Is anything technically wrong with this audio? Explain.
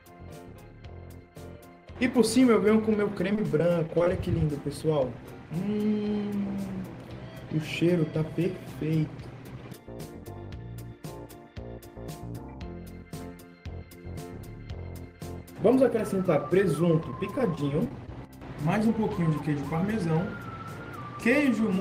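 Yes, there are two packet-loss problems. From 3.33 to 4.09 s there's repeated packet loss with a robotic sound: nine short holes, each patched by extending the last sound, so it comes out choppy. Then between 17.00 and 18.30 s there are scattered short gaps, around seven, each smoothed over by continuing the previous sound, leaving brief ticks or smears.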